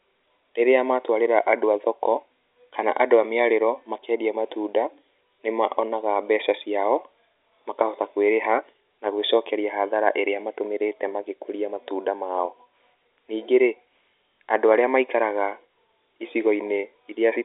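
Nothing's actually wrong with this bit of speech: it's simply telephone-line audio, carried in G.711 A-law coding at 64 kbps, so the band tops out around 3.8 kHz, exactly as a landline call should.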